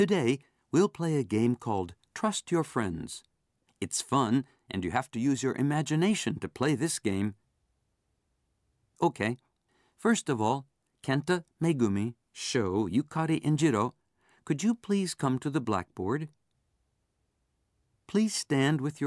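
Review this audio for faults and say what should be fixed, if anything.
Nothing stood out on listening to this speech recording, so there is nothing here that needs fixing.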